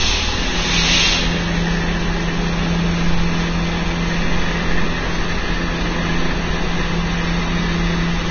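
Throughout this recording of everyday sound, the treble is hissy and grainy, tones are roughened and attacks blurred, the likely cause being heavy Vorbis compression, at a rate that fits roughly 20 kbps. A spectrogram shows nothing above 6.6 kHz, with speckled, noise-like energy replacing fine detail below that ceiling.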